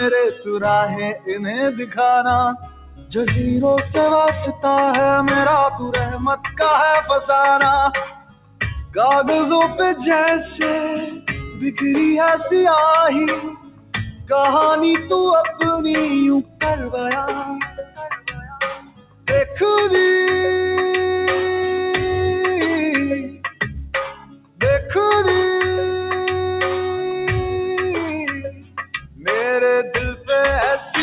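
A noise suppressor applied to music or sounds stays active across the whole clip, treating sustained tones, ambience and decays as noise. Gain swings by around 15 dB as attacks pass and held material is pulled down, so the sound pumps and thins, all within a band that stops at 4 kHz, consistent with a narrowband call codec such as G.711.

Sound cut by the noise suppressor occurs at 0.31–3.14 s, 5.75–7.1 s, 8.05–9.79 s, 11.06–11.82 s, 13.37–19.61 s, 23.22–24.92 s and 28.3–30.86 s. In each span, steady or fading passages sink by about 16 to 20 dB or have their tails cut short, while sudden onsets come through largely intact.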